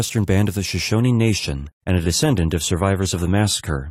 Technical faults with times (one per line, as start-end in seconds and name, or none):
0.85-3.91 adaptive stream at a lower bitrate